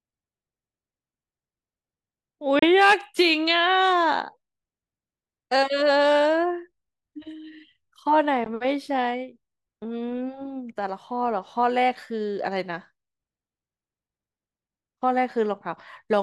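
Packets likely failed to reach the headphones in time over the wireless link, giving a Bluetooth dropout in this speech clip. The output cuts to silence at 2.59–2.65 s and again at 8.44–8.49 s, then resumes as if it had played on, skipping about 30 ms and 15 ms of audio.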